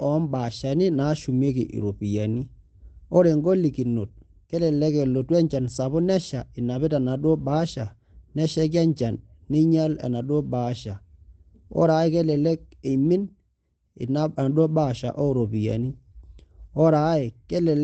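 Nothing technically wrong turns up in this bit of speech, which comes across the way you'd expect from an ordinary call connection carrying audio up to around 8 kHz.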